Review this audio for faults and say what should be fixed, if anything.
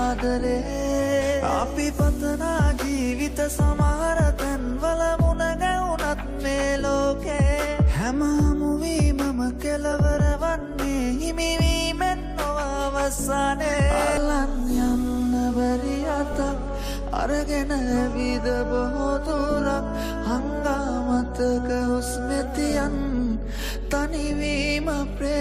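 Corrupt frames decoded: flipped bits in the compressed stream reached the decoder, which played each damaged frame anyway and put energy at the wrong frequencies. The result is short bursts at 9.92–9.94 s (about one frame), then 13.69–13.74 s and 22.37–22.42 s (a couple of frames each). They peak at about −20 to −15 dBFS. Checking each frame for errors and concealing bad frames instead of decoding them would prevent this.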